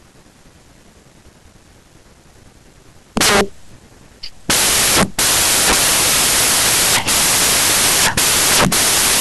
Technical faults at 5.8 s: samples built from the wrong bytes

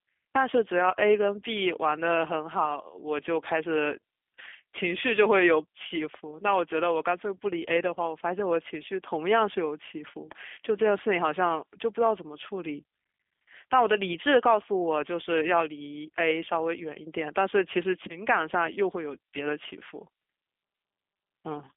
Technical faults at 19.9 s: G.729 codec

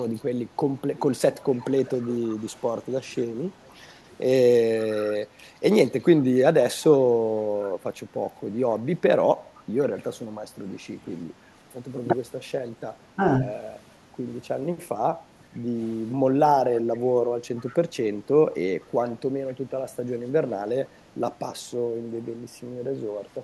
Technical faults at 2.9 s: echo leak

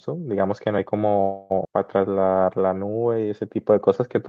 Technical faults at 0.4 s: none

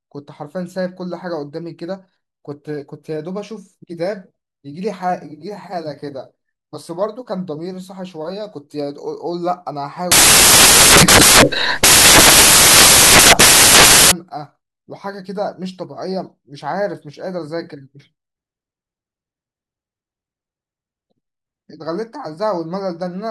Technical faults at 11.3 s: samples built from the wrong bytes

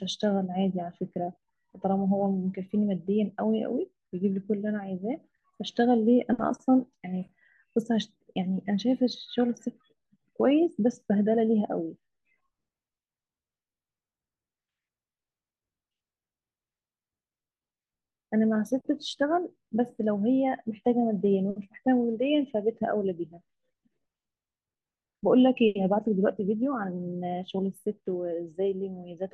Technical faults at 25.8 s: none

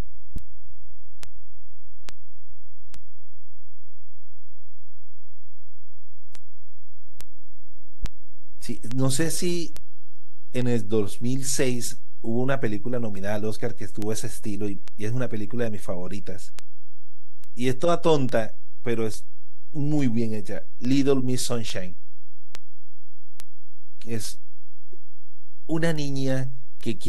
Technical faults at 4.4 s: DC offset; word clock ticks

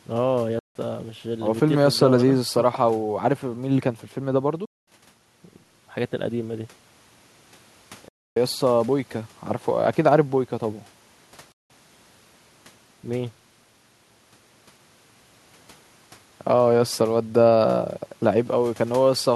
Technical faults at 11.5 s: Bluetooth dropout

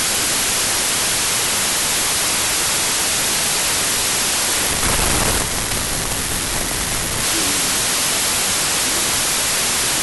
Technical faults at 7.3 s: wrong sample width

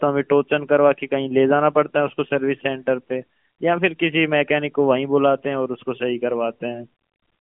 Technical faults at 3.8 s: none

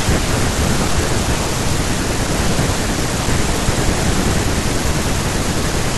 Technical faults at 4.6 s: audio missing between chunks

